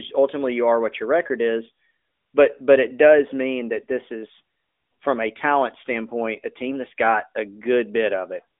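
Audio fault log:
No faults: the speech carries the band-limited character of an AMR narrowband mobile codec line, with nothing above 3.7 kHz and only light coding colour, as that path normally sounds.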